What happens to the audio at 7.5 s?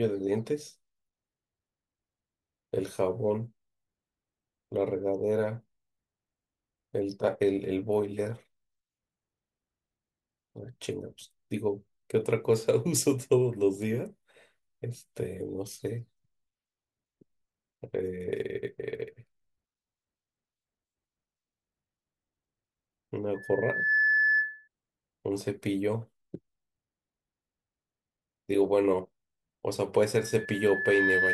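Nothing goes wrong at 7.5 s; the speech continues intact through that moment, with no dropout, click or distortion to be heard.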